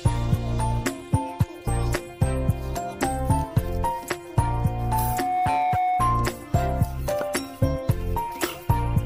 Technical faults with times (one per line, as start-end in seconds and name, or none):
4.39-6.43 loudspeaker feedback squeal